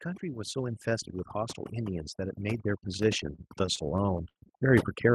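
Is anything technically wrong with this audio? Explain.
Yes, three problems are audible in this speech clip.

Overdone noise removal runs throughout. The noise reduction was set too aggressively, muting individual frequency bands whenever they sat close to its noise estimate and taking quiet parts of the voice with them. The background drops and breaks up into twinkling specks.

Automatic gain rising starts at about 0.2 s and continues to the end. The gain control judged the input too quiet and kept pushing its gain up, so voice and background swell together gradually, a slow upward drift over several seconds rather than a sudden jump.

Repeated stalls (stutter) occur between 3.35 and 4.38 s. Packets kept arriving late, draining the jitter buffer seven times. Each time the receiver stretched the last sound to fill the wait, about 165 ms in total and at most 74 ms at once. Nothing is lost, but the speech drags and stutters.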